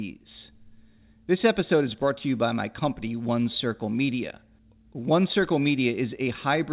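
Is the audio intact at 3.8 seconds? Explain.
Yes, the speech is intact at 3.8 seconds: nothing breaks, drops out or distorts there, and the only thing to hear is the narrow telephone-band sound of the call path, with nothing above 4 kHz.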